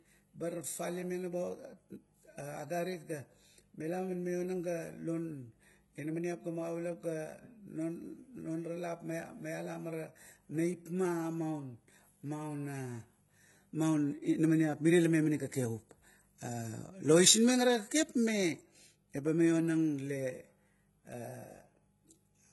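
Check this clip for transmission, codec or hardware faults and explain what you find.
One fault runs through the whole recording: HE-AAC compression, and the damage is heavy. The treble reaches higher than plain AAC would at this bitrate, but s sounds come out gritty and metallic, and nothing is present above about 11.8 kHz. The likely cause is a codec coding only the lower band and rebuilding the top by copying lower bands upward, which fits a very low bitrate around 16 kbps. On a spectrogram the upper band looks like a smeared, repeated copy of the lower one, ending at a hard ceiling.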